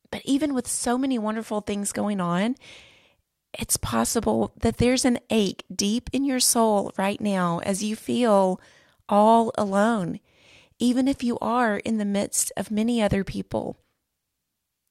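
From about 6.24 s, right after "an ache deep in", sample clock jitter sets in and stays to the end. The converter's clock is wobbling, on the order of a microsecond, so each sample lands slightly off time, and the error is largest where the waveform moves fastest. You hear it as a faint hiss or grit riding on the louder, brighter parts of the speech, roughly 40 dB down, and it drops away in the pauses.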